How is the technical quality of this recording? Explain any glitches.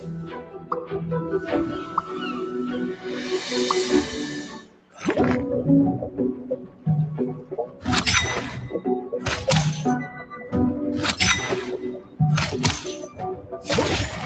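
The recording is compromised by a speech-oriented noise suppressor working on non-speech material. It passes through a call path whose content stops at 8 kHz, consistent with an Opus call codec.

Noise suppressor applied to music or sounds: throughout, the suppressor mistakes sustained tones and ambience for noise, with its gain swinging by roughly 10 dB. Attacks survive but held portions sag, so the level pumps. A waveform shows an uneven, breathing envelope, and a spectrogram shows patchy, flickering energy.

Sound cut by the noise suppressor: these dips occur at 0.0–0.94, 1.82–2.11, 4.43–5.01, 6.42–6.86, 7.35–7.87, 10.08–10.53, 11.99–12.2 and 13.07–13.67 s. Each time, steady or decaying sound is pulled down by about 6 to 11 dB. These spans look like hollowed-out stretches in the waveform and like faded, truncated tails on a spectrogram.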